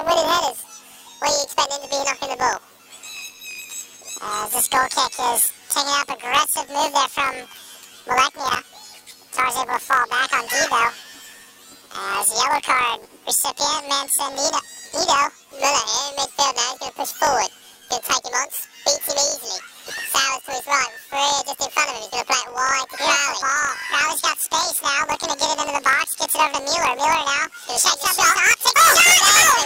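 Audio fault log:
throughout, planar audio read as interleaved: octave-high sound with a rough buzz near 47 Hz. Each 21.33 ms block, fitting 1024 samples, plays twice at double speed.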